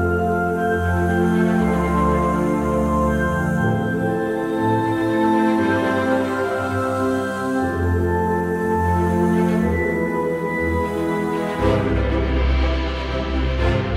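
Nothing here sounds off to me; the audio runs along steadily with no dropouts, glitches or other technical trouble anywhere along the way.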